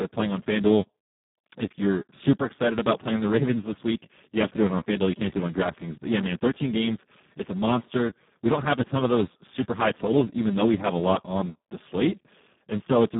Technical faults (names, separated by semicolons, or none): Speex codec